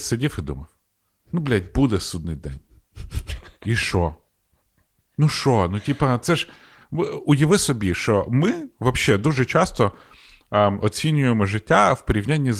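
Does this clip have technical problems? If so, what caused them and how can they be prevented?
No, this clip has no technical problems, so nothing needs preventing.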